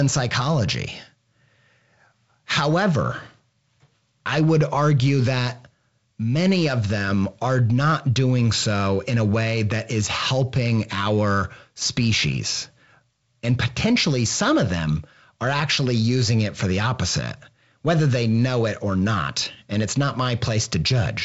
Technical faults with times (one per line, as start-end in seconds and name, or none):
none